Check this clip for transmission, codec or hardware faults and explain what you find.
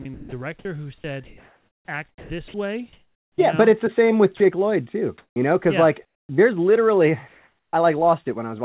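Several voice-detector faults occur in this speech, heard through a call path whose sound stops at 4 kHz, consistent with G.711 mu-law.

From 0.02 to 3.38 s the speech is choppy. This is likely sound chopped by the voice detector, which repeatedly stopped sending, losing about 1.7 s to comfort noise.

From 4.37 to 4.40 s a brief slice of speech gives way to comfort noise. This is likely sound dropped by the voice detector, which mistook 30 ms of speech for background.

At 5.18 to 5.36 s, 6.05 to 6.29 s (after "know because yeah", before "there's literally") and 7.28 to 7.73 s (after "there's literally"), the real background turns flat and featureless. It drops by about 4, 22 and 3 dB respectively. This is likely comfort noise in place of the background, synthesized by the receiver while the sender paused transmission.

At 5.34 to 5.36 s and 7.71 to 7.73 s, speech starts abruptly without its soft beginning. 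This is likely onset clipped by the voice detector, which reacted late, so 20 ms was filled with comfort noise.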